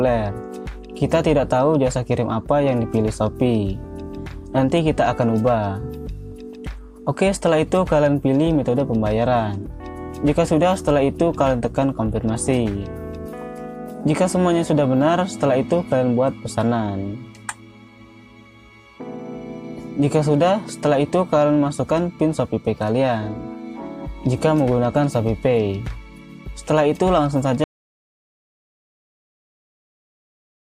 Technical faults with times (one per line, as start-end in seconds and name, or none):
27.64-30.63 audio dropout to silence